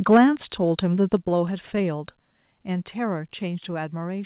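Speech carried over a narrowband call path, with nothing above 4 kHz, consistent with G.711 A-law at 64 kbps. From 0.11 to 0.21 s the loudest syllables carry a harsh, crackling edge with flattened peaks, roughly a tenth of the samples squared off at about 5 dB over full scale, most likely microphone overload at the converter. The level then drops in distinct steps at 0.17 s (about 3 dB), 1.17 s (about 4 dB) and 2.19 s (about 3 dB), with speech and background falling together each time. This is likely the microphone volume stepped down by the call software's automatic gain control reacting to a microphone it found too loud or clipping.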